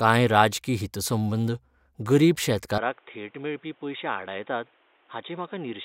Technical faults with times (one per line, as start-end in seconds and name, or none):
2.78-5.85 input switched to a poorer device